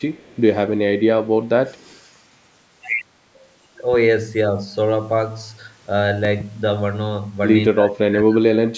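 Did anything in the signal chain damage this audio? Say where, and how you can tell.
Yes. In call processing, a faint echo leak, a very quiet copy of the sound about 223 ms behind it, appears at 0.17–0.36 s and 1.69–1.99 s. It is likely a loudspeaker echo the canceller missed, and the fixed delay separates it from room reverb.

At the analogue wiring or driver stage, a loud pop lands at 3.93 s and a double pop at 6.25–6.43 s. The sound continues underneath, so these are likely added voltage spikes, not clipping.

In call processing, from 7.7 s to the end, speech is suppressed in double talk, dipping very deeply for about a second. This likely points to the echo canceller ducking during crosstalk, not a network dropout.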